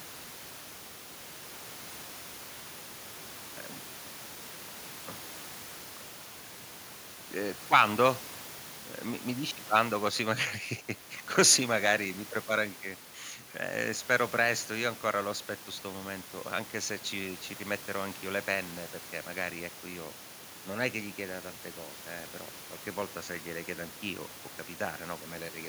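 Nothing technically wrong turns up anywhere in this speech recording, so there's no fault to point to and no time worth marking.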